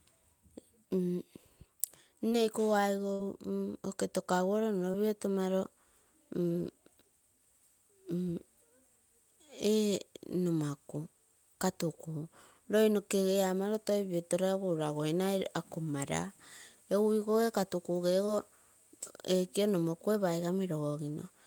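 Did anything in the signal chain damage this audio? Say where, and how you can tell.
Yes. Short concealed packet loss, at 2.29, 4.91 and 18.25 s, is a network fault. Each time about 20 ms of the call arrived too late to decode, and the receiver covered the hole with roughly 20 ms of synthesized continuation before blending back into the real speech. You hear it as a brief smear or wobble lasting about 40 ms, and a short consonant there can drop out.

A burst of packet loss runs from 3.13 to 3.21 s, also on the network side. About 60 ms went missing in a row, which is longer than a single-packet gap. The decoder extended the last sound for roughly 60 ms and faded it as the gap went on, so that stretch becomes a held buzz or dying hiss. The speech then picks up later, with the audio in between gone.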